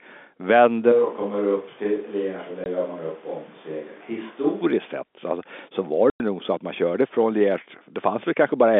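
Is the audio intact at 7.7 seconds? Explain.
Yes, at 7.7 s the speech is intact, with nothing heard there beyond the narrow telephone band of the G.711 line it was carried over.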